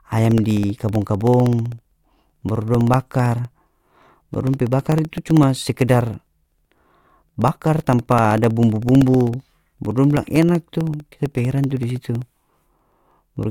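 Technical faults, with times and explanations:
0.06–13.43 s, periodic USB or driver dropouts: every 64 ms, some two hundred times, about a millisecond of speech is blanked to silence, giving a steady ticking heard only while sound is present. The strict regularity distinguishes it from random clicks or network packet loss.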